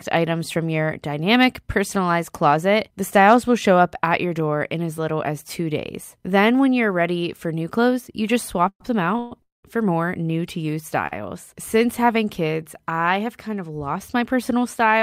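Three call audio freezes come close together, at 8.68 to 8.81 s, 9.19 to 9.32 s and 9.42 to 9.64 s. The speech halts and the last sound carries on as a fading buzz. The first and third die away into silence. The likely cause is delayed packets draining the jitter buffer. The speech then resumes where it stopped, so nothing is lost.

At 11.07 to 11.13 s comes a short stall from a late packet. A packet missed its slot and the buffer briefly ran empty. The last sound is held about 43 ms too long, with a slight buzz, before the speech continues.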